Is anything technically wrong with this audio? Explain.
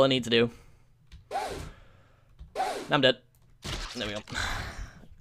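No technical faults are audible.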